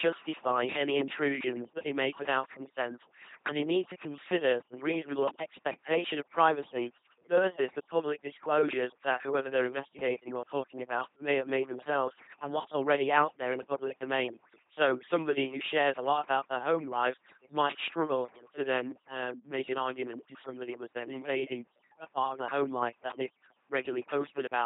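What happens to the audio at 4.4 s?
At 4.4 s, as everywhere else in the clip, the speech is passing through an LPC-10 vocoder. Each short frame is rebuilt from a simple vocal tract filter excited by either a pulse train or noise, never a blend, so the voice comes out as a buzzing, mechanical robot sound. Where the voiced or unvoiced decision misfires, stray buzz or hiss appears. Nothing survives above about 3.8 kHz, and the heavy damage fits a 2.4 kbit/s stream.

Overdone noise removal is also present at 4.4 s and across the whole recording. The noise reduction was set so aggressively that any frequency band close to its noise estimate gets pushed far down or cut entirely, taking the quieter parts of the speech with it. Between phrases the background drops and breaks up into twinkling, chirpy specks.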